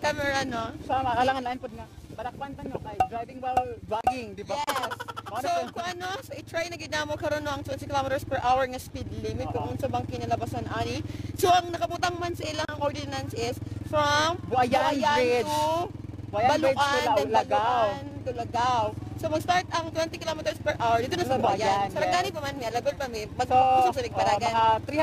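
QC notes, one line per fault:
Throughout, periodic clock jitter: the converter clock wobbles at around 2 kHz, adding sidebands around everything, so highs get a rough, metallic edge that disappears in silences.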